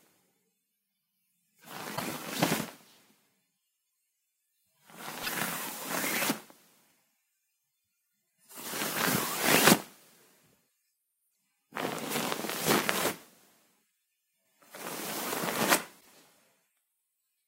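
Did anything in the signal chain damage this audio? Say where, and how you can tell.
Yes: damaged data in the compressed stream, at the codec or storage stage, produces short disruptions at 1.93–2.02, 5.20–5.29, 11.27–11.29 and 15.97–16.06 s as the decoder misreads corrupt frames and hunts for sync.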